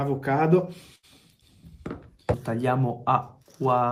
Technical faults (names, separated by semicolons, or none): burst of packet loss